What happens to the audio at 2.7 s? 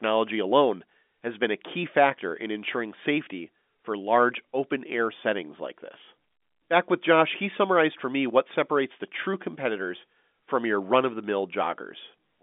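Nothing goes wrong at 2.7 s: the speech passes through intact there, carried cleanly by G.711 telephone coding within its usual narrow band of roughly 200 Hz to 3.6 kHz.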